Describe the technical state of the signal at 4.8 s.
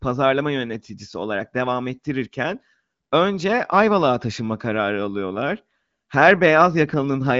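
At 4.8 s the speech is intact, passing cleanly through AMR wideband (HD Voice) coding with only its normal light band limit.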